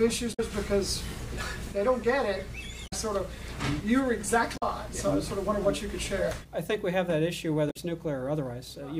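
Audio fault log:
0.30–0.40 s, 2.84–2.93 s, 4.53–4.63 s, 7.67–7.76 s: damaged data in a compressed stream. Corrupted bytes make the decoder misread or reject frames and hunt for the next valid header, so each roughly 0.1 s stretch breaks into a chirp, squawk, click or short gap.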